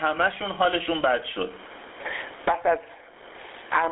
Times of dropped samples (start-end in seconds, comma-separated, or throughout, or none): none